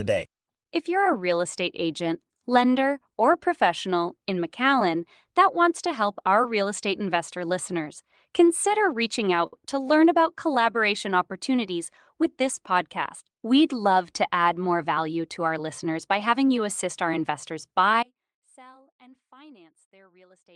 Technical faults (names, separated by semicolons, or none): short stall from a late packet; audio dropout to a faint residue